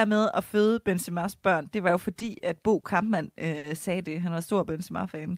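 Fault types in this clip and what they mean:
Short stall from a late packet: a packet showed up late, so the receiver held the last sound 20 to 50 ms, stretching it slightly before carrying on, nothing lost.
Jitter buffer slow-down: near the end the receiver repeated tiny slices to rebuild its reserve, adding about 47 ms, so speech drags to 95% speed at unchanged pitch.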